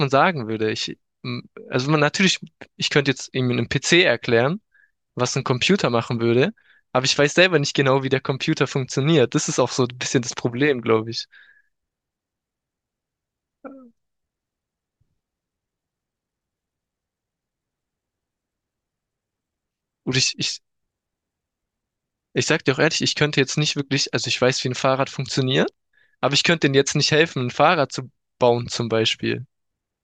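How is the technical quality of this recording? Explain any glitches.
No glitches can be heard anywhere in the recording, and the speech signal stays continuous and stable throughout.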